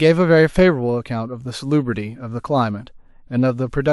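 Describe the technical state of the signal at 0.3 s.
At 0.3 s the speech signal is intact, with no dropout, clipping, distortion or other technical fault audible at that point.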